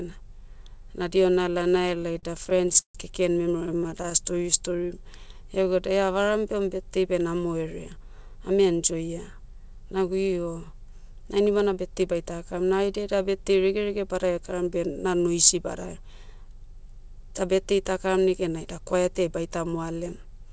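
Repeated stalls (stutter) from 1.52 to 2.97 s: late packets kept emptying the jitter buffer, so the receiver stretched the last sound over gaps up to 140 ms, covering about a quarter of that stretch. The speech drags and stutters without losing anything. It recurs more briefly from 3.66 to 4.13 s, right after "keken memero", with tiny gaps of about 13 ms.

Jitter buffer slow-down from 4.19 to 5.71 s: repeated pitch periods add 120 ms, so the speech plays at 92% speed at unchanged pitch, sounding drawn out.

Jitter buffer speed-up from 7.67 to 10.47 s, just after "birthday beh", then 14.23 to 14.68 s and 18.42 to 18.95 s, just after "birthday takaram": pitch periods are trimmed to shed excess delay. Speech runs 6 to 7% fast and sounds hurried. About 150 ms goes in the first stretch and roughly 40 ms in each later one.

Throughout, nothing is heard above 8 kHz, consistent with the G.722 wideband call codec.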